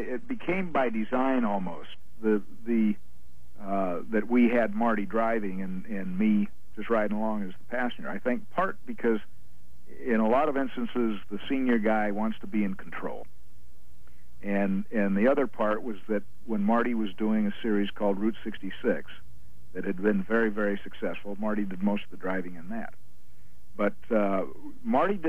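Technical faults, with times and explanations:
0.0–2.0 s, adaptive stream starting at a low bitrate: the opening sounds thin and smeared, with no content above 12.3 kHz, which fits an HE-AAC stream near 16 kbit/s. At 2.0 s quality jumps without a gap as the player switches to a higher-bitrate AAC-LC rendition, around 96 kbit/s.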